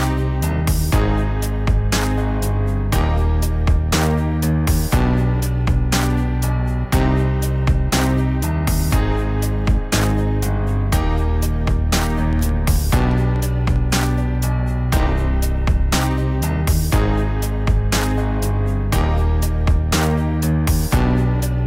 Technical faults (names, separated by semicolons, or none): train of clicks